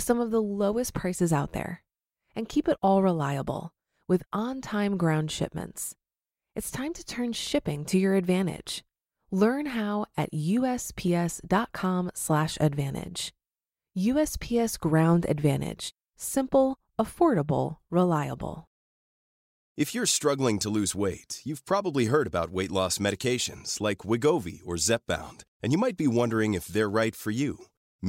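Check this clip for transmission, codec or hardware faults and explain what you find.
No faults detected in this recording.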